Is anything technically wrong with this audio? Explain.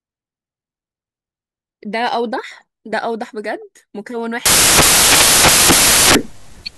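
Yes. From 4.46 s to the end, the speech turns into loud, harsh broadband noise. These are samples built from the wrong bytes: each value is assembled misaligned or byte-swapped, so the rapidly fluctuating low bits dominate.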